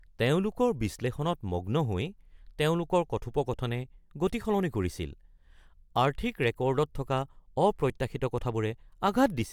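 No technical faults are audible anywhere in this speech recording.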